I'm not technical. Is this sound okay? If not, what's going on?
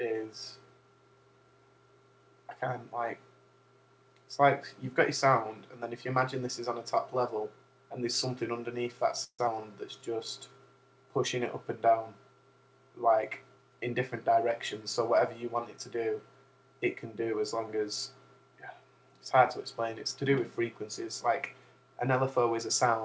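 No. There are four short glitches, all typical of sound sent over an internet call.

At 9.24 to 9.41 s there is a call audio freeze. The sound stalls for about 0.15 s. The last bit of sound is stretched into a fading buzz or hiss, then about 0.07 s of silence. Then it carries on where it stopped. This is likely because pieces of the call arrived late.

Right after, at 9.47 to 9.56 s, there is a skip ahead. About 0.07 s of sound is simply missing. The playback jumps forward and joins the two sides almost directly. That catches up part of the delay the freeze caused.

From 9.98 to 10.59 s there is a jitter buffer slow-down. The system repeats tiny slices of sound to build up a safety reserve. Playback runs at about 90% speed, with the same pitch. It adds about 0.07 s and sounds slightly drawn out.

From 13.22 to 14.51 s there is a jitter buffer speed-up, the reverse. Too much sound had piled up waiting, so the system trims tiny slices. 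Playback runs at about 108% speed, cutting roughly 0.1 s. It sounds a little hurried.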